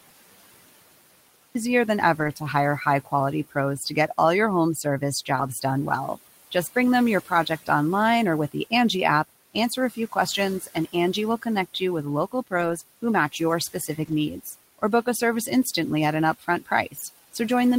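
The speech enters already in motion at 1.55 s, jumping out of digital silence with no natural onset, as if the first part of a syllable were sliced away. This is a cut-off start: capture or streaming began late, so the first sound is truncated where the audio begins rather than building up naturally. The silent lead-in up to that point is not quiet room tone but digital silence.

Throughout the clip, the room noise sits about 19 dB under the speech, and it pumps. It sinks in the pauses and swells back under each phrase. These are noise suppressor artifacts: the suppressor estimates which frequency bands hold steady noise and pulls them down frame by frame, here by about 17 dB.

At 2.19 s, 5.35 s, 12.57 s and 14.03 s, brief patches of 60 to 80 ms turn grainier and noisier, though the sound never drops out. Each is a lost packet rebuilt from error correction. Packets went missing, but the following packet carried a coarse low-bitrate copy of each, and the decoder played that instead. 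The 60 ms patches fit three 20 ms packets and the 80 ms ones four.

In five stretches, the speech itself sounds swallowed: from 3.05 to 4.1 s, 4.83 to 5.64 s, 6.74 to 7.68 s, 9.54 to 15.07 s and 16.39 to 17.35 s. Soft consonants and word endings fade into the background, dipping by up to about 17, 10, 12, 18 and 14 dB respectively. This is speech cut by the noise suppressor, which misread quiet speech energy as noise and turned it down along with the background. The first three stretches each lose roughly a tenth of a second and the last about two tenths, but the long middle stretch loses around half a second in total.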